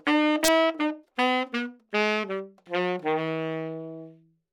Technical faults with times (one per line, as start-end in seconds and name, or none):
0.44-0.48 integer overflow